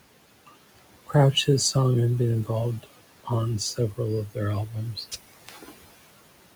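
Throughout the speech, a noise suppressor pulls down each band it judges to be steady background, cutting the room noise by about 17 dB. That noise, otherwise sitting about 17 dB under the voice, dips between phrases and swells beneath them.

The same suppressor mistakes some speech for noise, producing speech cut by the noise suppressor. From 3.75 to 3.99 s it turns down roughly a tenth of a second of speech by up to about 16 dB, and from 5.34 to 5.82 s roughly a fifth of a second by up to about 18 dB, so those sounds come across swallowed and faint.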